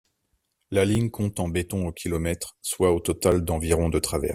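At 0.95 s, just before "compte en béton au", and again at 3.32 s, right after "au kilomètre soit au", the speech briefly catches on a repeated buffer. The device got no fresh audio in time and replayed the last 5 ms once, so a tiny slice sounds twice with hard joins. Because the piece is so short, it comes across as a click or brief buzz rather than a stutter. Unlike a dropout, nothing goes silent and no speech goes missing.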